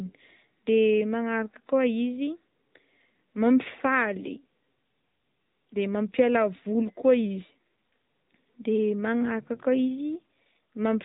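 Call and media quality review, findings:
AMR narrowband mobile codec, whole clip: speech band-limited, nothing above 3.8 kHz, plainly buzzy, synthetic texture. Codec encode stage. Unlike a simple telephone-band filter, pulse-driven vocal-tract model adds artificial buzz; damage level fits a mid-rate mode near 10 kbps.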